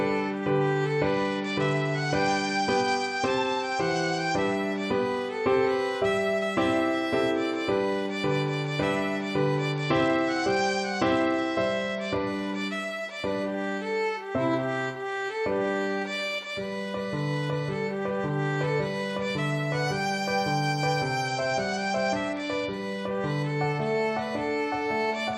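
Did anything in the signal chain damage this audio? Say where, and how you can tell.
Yes, the damage is at the codec stage: a Bluetooth SBC bit pool drop, heard three times, at 1.06 to 4.55 s, 9.72 to 12.27 s and 21.28 to 22.73 s. In each stretch the treble goes dull and a gritty grain sits on the sound, then it clears. That fits a congested link where the sender cut the bit pool from 31 to 11, around 83 kbps, starving the top sub-bands and coarsely quantising what's left.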